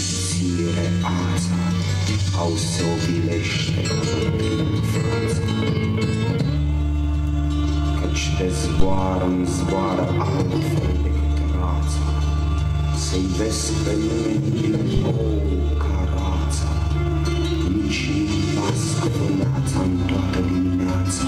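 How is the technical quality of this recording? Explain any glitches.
Two phantom power thumps occur, at 8.80 to 9.12 s (peak about -6 dBFS, 73 ms decay) and 14.97 to 15.02 s (about -10 dBFS, 12 ms decay): supply switching steps through coupling capacitors, producing deep, quickly decaying low-frequency knocks.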